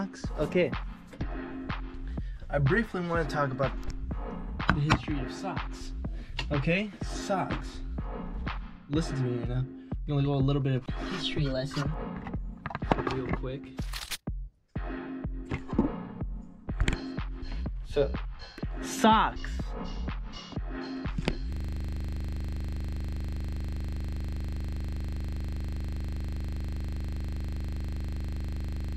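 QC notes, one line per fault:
21.53 s to end: system hang loop. From 21.53 s the audio stops moving forward and a single 40 ms slice repeats back to back for the rest of the clip, around 186 passes. The repeat rate is 25 Hz, so it is heard as a steady, rough buzz at 25 Hz rather than a stutter. The machine or its driver stalled while the sound hardware kept reading the same short stretch of its ring buffer. The 40 ms slice points to a small buffer.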